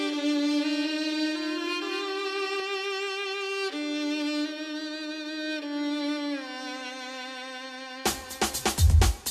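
From the very start until 2.6 s, the music carries a doubled audio track. A second full-band copy trails the first by about a fifth of a second. It sits a few decibels below the original. The copy has no decay and no room colour, so it sounds like a flat, hard repeat rather than an echo. At 2.6 s it stops abruptly. The likely cause is a second, slower capture path or an edit holding two misaligned copies.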